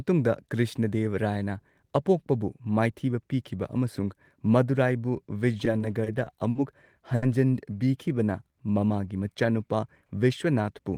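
From 5.65 to 6.58 s, packets kept arriving behind schedule and the jitter buffer ran dry five times, producing repeated stalls (stutter). The receiver filled about 120 ms by extending the last sound, the longest gap 50 ms, so the speech drags and catches unevenly.

At 7.15 to 7.25 s a single late packet caused a short stall: the buffer emptied, the playout delay grew by 70 ms, and the receiver held the preceding sound for 70 ms before resuming, leaving one syllable unnaturally sustained with a slight buzz or dip.

Between 7.87 and 8.81 s the receiver rebuilt its reserve through a jitter buffer slow-down, repeating individual pitch periods and pause fragments to add 97 ms. Playback drops to 91% speed at unchanged pitch, so the speech sounds drawn out.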